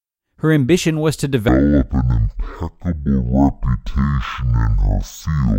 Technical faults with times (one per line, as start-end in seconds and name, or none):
1.49-5.59 stereo read as mono